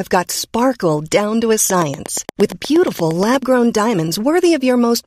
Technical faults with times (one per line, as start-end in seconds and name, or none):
1.70-3.36 train of clicks